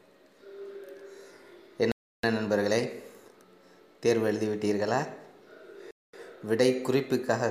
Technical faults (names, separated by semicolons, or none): Bluetooth stall